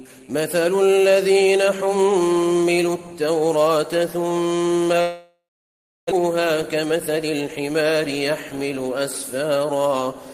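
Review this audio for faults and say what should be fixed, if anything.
Long network dropout, 5.01 to 6.13 s: a likely break in packet delivery left the receiver with nothing to play. It stretched the last sound into a fading buzz or hiss, then gave about 0.67 s of silence. When audio returns, a full second is missing and timing has shifted slightly.

Jitter buffer speed-up, 6.75 to 7.61 s: the buffer held more audio than it aims for. The receiver repeatedly cut short pitch-period slices to shed about 70 ms, so the sound runs at 107% speed, hurried but at unchanged pitch.

Preventing both calls for a more stable network path with redundancy or forward error correction, plus a jitter buffer that drains gradually rather than in bursts.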